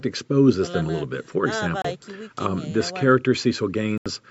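Audio packets most likely failed to reach the headphones in time and were discarded, a Bluetooth dropout, so playback fell silent until good packets arrived. The speech cuts out from 1.82 to 1.85 s, a gap of about 27 ms, consistent with two lost packets, and again from 3.98 to 4.06 s, an 80 ms hole that fits roughly six. Each time the speech resumes further on, as though it had kept playing through the gap.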